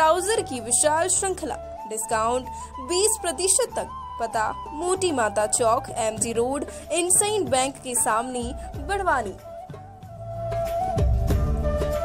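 No technical faults can be heard anywhere in this clip.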